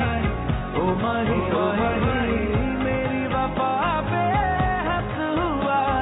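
No technical faults are audible anywhere in this audio.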